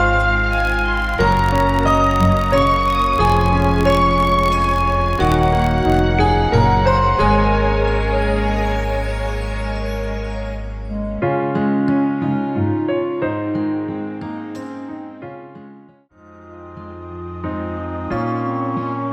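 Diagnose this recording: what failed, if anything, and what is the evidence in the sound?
A filter restarted on every block in the buffer-level processing stage, from 0.53 to 6.03 s. A buzz at 43.1 Hz follows the signal's level. Each block opens with a transient from a zeroed filter state, which fits 1024-sample blocks at 44.1 kHz.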